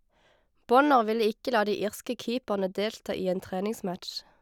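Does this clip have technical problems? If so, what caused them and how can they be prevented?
No, this clip has no technical problems, so there is nothing to trace or prevent.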